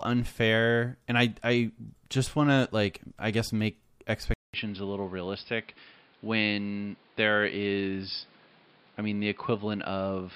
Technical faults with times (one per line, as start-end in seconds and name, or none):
4.34-10.35 input switched to a poorer device